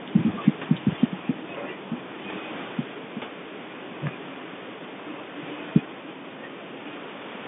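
Speech over a G.711 A-law telephone line at 64 kbps, band-limited to roughly 150 Hz to 3.6 kHz with nothing above 3.8 kHz, and room noise sitting about 25 dB under the talker: no technical faults.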